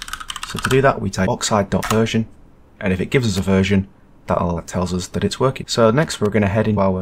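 At 1.26, 4.56 and 6.76 s, damaged data in a compressed stream makes the decoder lose frame sync. Each is a brief chirp, squawk, click or short hole. Loose connector crackle, from a contact making and breaking, gives irregular scratching bursts at 3.37 to 3.39 s and 6.03 to 6.26 s.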